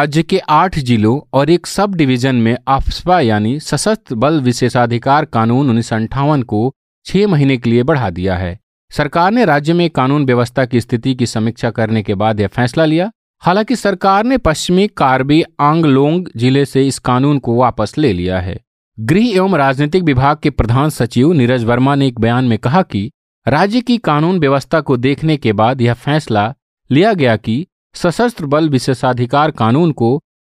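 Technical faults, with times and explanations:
No technical faults are audible in this speech recording.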